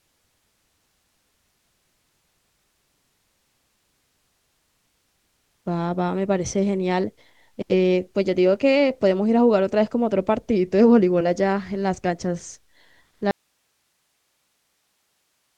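At 13.31 s the speech cuts out abruptly and never returns, an audio dropout to a faint residue that lasts to the end. Only hiss remains, roughly 50 dB below the signal, likely from a live path after the break. The waveform collapses to a thin flat band; the spectrogram shows a sudden cliff into uniform noise.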